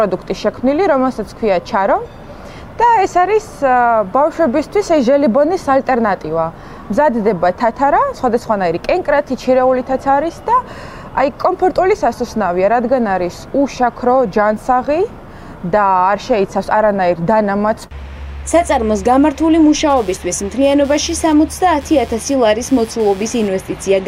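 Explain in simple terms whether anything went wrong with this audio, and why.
Computer activity noise: the computer's processor, graphics card or mouse put changing loads on a ground connection shared with the audio circuit. From 19.9 to 23.5 s this adds a quiet buzzing chirp, pulsing roughly 150 times a second, that tracks the computer's activity rather than the sound.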